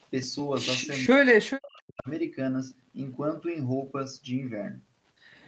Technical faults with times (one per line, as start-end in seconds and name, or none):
1.02-2.09 speech suppressed in double talk